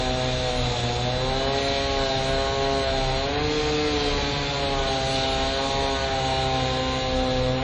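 Throughout, the sounds ring and wash, with breathing hiss and nothing above 9.9 kHz. This is likely WMA compression, fitting a bitrate near 32 kbps.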